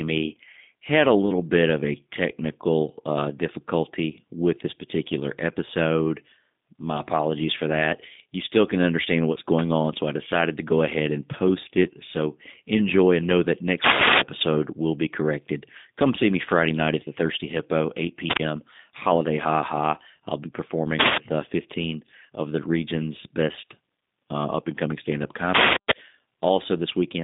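The whole thing goes through a G.729 codec at 8 kbit/s, so nothing's above 3.8 kHz and the speech sounds plainly rough and synthetic. Then an uninitialised buffer plays leftover memory as a loud burst of digital noise from 13.84 to 14.21 s, between "enjoy and know that" and "will be corrected", which fits a 16384-sample block. A shorter burst follows from 18.30 to 18.39 s.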